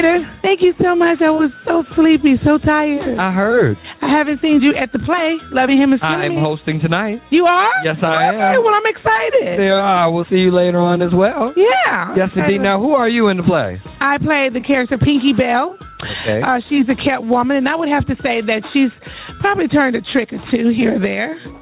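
From start to finish, the input gain appears set far higher than the microphone needs, and a fast limiter or compressor likely keeps hauling it back down on each loud sound. The result is gain pumping: the level swings by around 10 dB, so loud and soft passages sit unnaturally close in level and the whole sound feels squashed. All of it comes through a call path whose band stops at 4 kHz.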